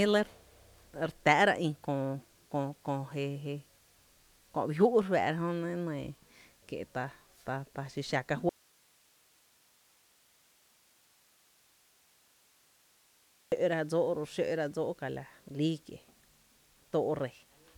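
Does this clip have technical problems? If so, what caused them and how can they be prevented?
Yes. An audio dropout to a faint residue runs from 8.49 to 13.52 s, leaving only hiss roughly 35 dB down, likely from an upstream signal break while the downstream chain stayed live. Secure and monitor source connections during recording.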